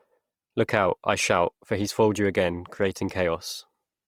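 Speech, with Opus compression damage plainly audible from start to finish. Voiced sounds turn grainy and rough, and the highs are filled with noise rather than left hollow, while the bandwidth stays full. This points to Opus music mode, likely at a low rate near 24 kb/s.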